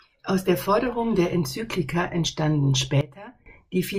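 At 3.01 s the speech drops abruptly by about 16 dB, and the background noise falls with it, so the whole signal steps down at once rather than fading. It stays at that lower level until 3.46 s, then snaps back up just as sharply. This sudden gain jump is likely a digital gain setting changing between one sample and the next with no ramp, applied and then removed.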